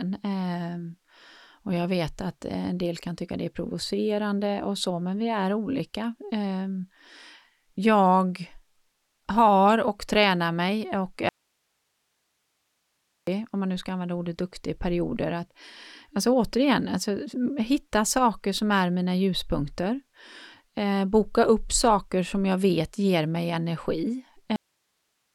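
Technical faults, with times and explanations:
11.29–13.27 s, audio dropout to a faint residue: right after "och tränar mig och" the speech vanishes abruptly for about 1.98 s and returns mid-flow at "om man nu ska". The gap is not silent. It holds steady hiss roughly 50 dB below the speech level. This is likely a break in the signal feed while the downstream path stayed live, so only its own noise floor passed through. The hard edges at both ends set it apart from a natural pause or fade.
24.56 s, cut-off end: the speech stops in the middle of a sound just after "vet ger mig energi". It drops straight to digital silence with no decay, and that silence lasts about 0.78 s to the end of the file. The final audio buffers were never written or played out, so the waveform is truncated instead of finishing. The abrupt stop, with no room tail or trailing breath, is what gives the clipped, unfinished impression.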